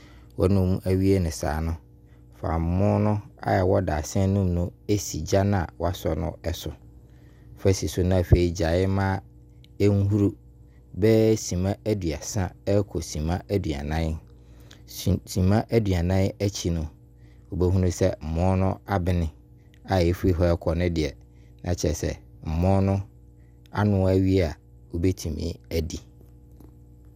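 There's a steady mains hum sitting under this speech recording for its whole length, a low tone at 60 Hz with a few low harmonics stacked on top. It's roughly 30 dB below the speech, so it's not loud, but it never lets up. That's the power line leaking into the signal path, typically through a ground loop between connected gear or a transformer sitting too close to a cable or input.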